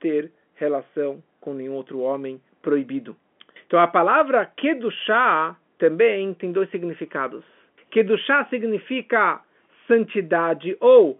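Listening to this speech clip, nothing stood out as a technical problem.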